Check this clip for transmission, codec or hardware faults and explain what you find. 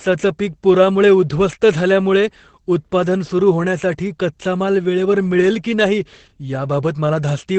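One codec fault runs through the whole recording: Opus voice compression. From start to finish the speech has nothing above 8.5 kHz, the wideband ceiling of Opus's SILK linear-prediction mode. The coarse excitation coding, which fits a low bitrate of around 12 kbps, makes the damage plainly audible: the voice sounds muffled, hoarse and slightly robotic. A plain low-pass filter would only dull the sound. Here the grainy, synthetic texture inside the remaining band marks it as a speech codec.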